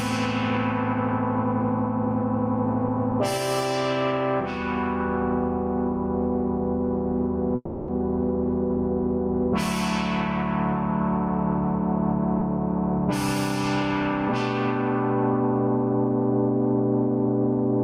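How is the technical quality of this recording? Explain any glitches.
Two transmission glitches break up this recording of everyday sound.

Call audio freeze, 7.55 to 7.90 s: the last moment of sound is stretched into a fading buzz or hiss for about 330 ms, likely because packets stalled in transit and the jitter buffer emptied. When they arrived, playback resumed exactly where it stopped, so nothing is lost but the timeline is delayed.

Skip ahead, 12.40 to 12.43 s: playback jumps forward, dropping roughly 70 ms of sound with only a tiny bridging fill. Audio was discarded while later audio already waited in the buffer, so the two sides butt together abruptly and some of the earlier delay is recovered.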